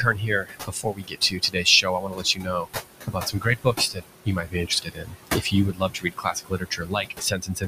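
Noise suppressor artifacts run through the whole clip: the room noise, sitting about 10 dB below the speech, is pulled down by about 19 dB frame by frame, so the noise sinks between the words and rises under them.

Speech cut by the noise suppressor occurs at 0.03–1.66 s, 1.82–2.68 s, 3.06–4.03 s, 4.25–5.54 s and 5.73 s to the end. The suppressor misreads quiet speech as noise, dropping it by up to about 22 dB, so softer parts sound swallowed or faint.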